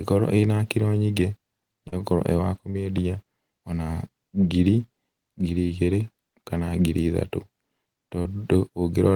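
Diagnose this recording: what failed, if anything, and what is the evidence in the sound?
Network problem: short concealed packet loss at 1.88, 2.70, 4.41 and 8.22 s. The decoder bridged 10 to 40 ms gaps by extending the preceding speech, which leaves brief smears.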